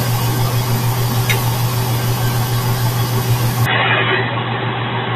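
At 3.66 s the sound abruptly turns dull and slightly quieter, narrowing in band with faint new background noise, likely an input switched to a poorer device.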